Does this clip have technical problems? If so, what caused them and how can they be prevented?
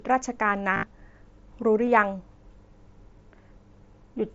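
Yes. Concealed Bluetooth headset packet loss occurs at 0.74 to 0.83 s and briefly at 1.86 s. Packets from the headset, carried over the mSBC codec, were lost, and the phone filled each gap by repeating a recent stretch of waveform. The first event includes a 60 ms run that sounds like a buzzy held tone with a slight warble as real speech returns. On a spectrogram it appears as flat, repeating harmonic bands. The waveform shows a periodic, constant-level envelope. Keeping the phone close to the headset with a clear line of sight and avoiding 2.4 GHz interference would prevent it.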